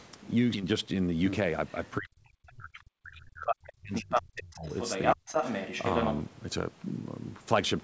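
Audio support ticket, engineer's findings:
Skip ahead at 0.54 s. Playback jumps forward with no fill, and roughly 0.4 s of speech is missing. The two sides of the cut join almost directly. Probable component: jitter buffer discarding queued audio on overflow, or loss in transit.

Speech suppressed in double talk, 1.99 to 4.66 s, and briefly at 5.15 to 5.21 s. The talker's speech dips, deepest by roughly 40 dB in the long stretch and around 30 dB in the short one. Likely cause: the echo canceller could not separate the talker from the far-end echo and attenuated both.

Other side's voice leaking through at 3.16 to 3.20 s (faint, far below the talker), 3.47 to 3.70 s, 3.95 to 4.22 s and 4.38 to 6.22 s. In the later segments it sits at about the talker's level, slightly above at 3.95 s. Likely cause: loudspeaker pickup not fully removed by echo cancellation. The call path's 8 kHz band limit, consistent with G.722, is present throughout.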